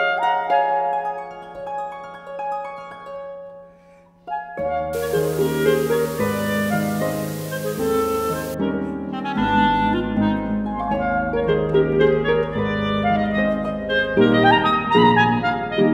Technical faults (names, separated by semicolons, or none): low bit depth with dither